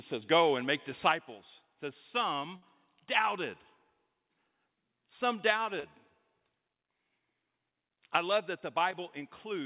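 At 2.56 s, right after "make disciples it says", there is a burst of packet loss lasting to 2.64 s. About 60 ms of audio failed to arrive in time, and the receiver bridged it by extending the last sound for about 60 ms while fading it down. What you hear is a short held buzz or fading hiss where the sound should continue. The audio then picks up further along, with that stretch gone.

At 5.80 s there is a short concealed packet loss, ending at 5.86 s. Roughly 40 ms never reached the decoder, and about 36 ms of synthesized continuation covers the hole before blending back into the real signal. It comes across as a brief smear or wobble rather than a clean gap. Both events sit on a narrowband call path with nothing above 4 kHz, which fits G.711 mu-law at 64 kbps.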